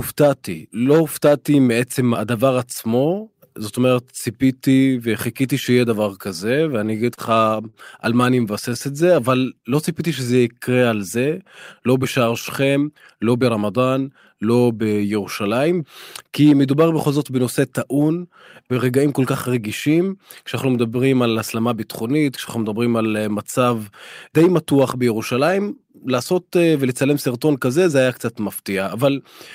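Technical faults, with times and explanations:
6.97–7.75 s, repeated stalls (stutter): Packets arrived late, so the jitter buffer ran dry five times. Each time the receiver stretched the last sound to cover the wait, about 93 ms in all, the longest 36 ms. Nothing is lost, but the speech drags and stutters.
8.13–8.77 s, scattered short gaps: A few packets went missing or came late, spread one by one over this stretch. The receiver bridged each tiny hole, roughly 10 ms at most, by continuing the last sound. Brief ticks and small hiccups result.
8.42–10.81 s, jitter buffer slow-down: The buffer was short of audio and rebuilt its reserve. It repeated single pitch periods and slices of pauses over and over, adding 170 ms. Speech runs at 93% speed with unchanged pitch, so sounds feel drawn out.
12.75–14.01 s, jitter buffer speed-up: Too much audio had piled up in the buffer. To cut the delay, the receiver trimmed short pieces of one or a few pitch periods again and again, about 150 ms in total. 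Speech runs at 111% speed, same pitch, sounding hurried.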